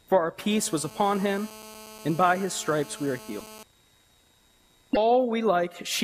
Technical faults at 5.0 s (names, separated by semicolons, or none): broken MP3 bit reservoir